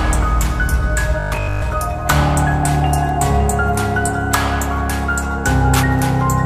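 From 1.20 to 1.72 s comes robotic sound from repeated short buffers: a rigid, metallic 50 Hz buzz, likely from 20 ms chunks replayed for most of that stretch. Unlike gaps or clicks, the sound never stops; it keeps a fixed pitch.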